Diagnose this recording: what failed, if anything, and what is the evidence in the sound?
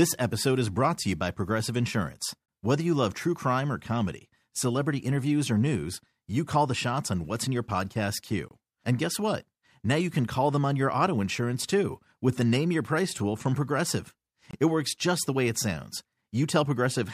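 The fault is a gap between chunks, at the storage or playback stage. The speech drops out for about 25 ms at 2.46, 8.48 (right after "what's in your podcast") and 14.51 s. Each hole recurs every 6 s. The chunks are joined with silence between them, but no sound is lost.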